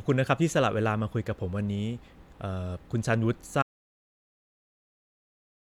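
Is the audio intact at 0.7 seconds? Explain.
Yes, the speech at 0.7 seconds is intact, with no dropout, click, distortion or other fault at that moment.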